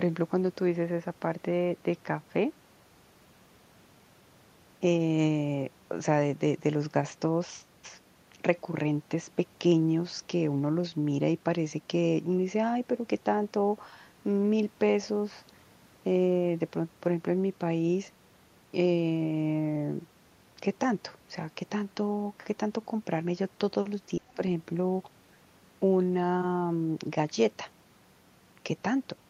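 Speech suppressed in double talk at 24.17 to 24.39 s: the speech drops by about 30 dB for roughly 150 ms, likely an echo canceller ducking the talker during overlap.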